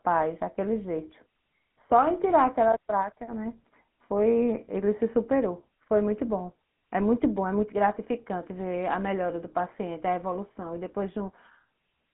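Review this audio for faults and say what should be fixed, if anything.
The GSM full-rate codec is audible throughout as a buzzy, gravelly roughness, fitting a 13 kbps speech codec. The line restricts the band to about 150 Hz–3.4 kHz. A spectrogram shows nothing above 3.8 kHz. Avoid it by recording or transmitting through a wideband path.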